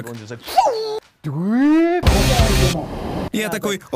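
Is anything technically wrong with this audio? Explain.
No, nothing is technically wrong with this audio. Nothing in it points to a problem with how the sound was captured, processed or reproduced.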